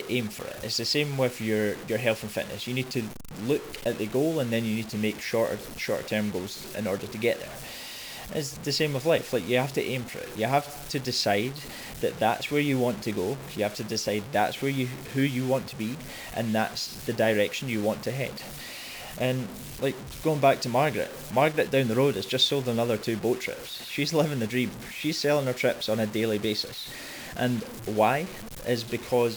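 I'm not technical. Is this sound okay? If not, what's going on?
No. The speech was most likely stored with far too little detail, about 6 bits, and the extra detail was simply chopped off rather than smoothed over. This is called low bit depth without dither. Because the rounding errors follow the voice itself, the whole clip sounds grainy and rough from start to finish, the grit shifts as the speaking changes, and the quietest moments crackle or drop out to silence.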